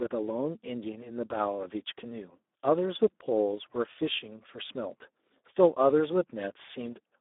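Throughout, heavy Speex codec damage makes the speech noisy and hoarse, which fits about 8 kbps. Sound spans 250 Hz to 3.6 kHz, nothing above 3.8 kHz.

At 3.59 s, one sharp click is heard. Its likely cause is dropped samples. A tiny sliver goes missing, so the waveform jumps abruptly.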